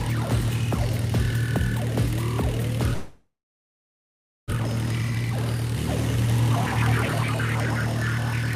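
At 2.93 s the audio stops being real and turns into a fading buzz. This lasts until 4.54 s. The likely cause is a long network dropout. The receiver kept repeating the last sound to cover the gap, but it decays quickly. Most of the stretch, about 1.16 s, is silence. When the sound returns, about 1.0 s of the original is simply gone. The delay also jumps by roughly half a second.

A jitter buffer speed-up follows immediately, from 4.55 s to 5.76 s. The buffer now holds too much audio, so the receiver trims it back. It cuts many tiny pieces, each a pitch period or a few long. Playback runs at 132% speed, with the pitch unchanged. Around 0.4 s is removed, so this part sounds rushed. A milder speed-up comes from 6.17 s to 6.53 s, at 107%. It removes only a few hundredths of a second.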